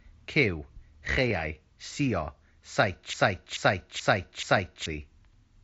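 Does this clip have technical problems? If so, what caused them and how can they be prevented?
Yes. Concealed Bluetooth headset packet loss occurs twice, at 1.30 s and 2.82 s. Each time, one voice packet between headset and phone went missing. The receiver filled the gap of about 7.5 ms by continuing the waveform with a closely matching stretch of the preceding audio. Because each loss is isolated and so short, each patch is nearly hidden, at most a faint blip in the speech. Keeping the phone close to the headset, with no body or obstacles between them and less 2.4 GHz interference nearby, prevents these losses.

A broken-record loop runs from 3.14 s to 4.86 s. The likely cause is a stall in the player, encoder or stream, which kept sending the last fragment it held instead of new audio. A slice of about 0.43 s repeats exactly, back to back, four times. The speech that should have filled those 1.7 seconds is lost. 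The wideband mSBC headset link carrying the audio adds its own light graininess on loud sounds. Giving the playback or streaming chain enough buffering and CPU headroom, and having it output silence rather than repeat old data when input runs dry, prevents this loop.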